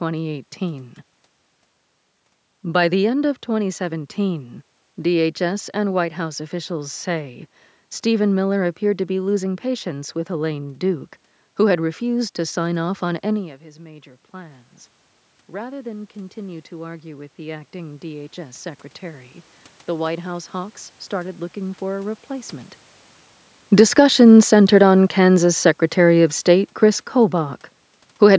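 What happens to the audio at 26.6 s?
At 26.6 s the automatic gain is falling. The control judged the input too loud, or its background noise too strong, and is easing its gain down. From 23.64 s to 28.34 s the speech sinks by about 7 dB. The room background sinks with it.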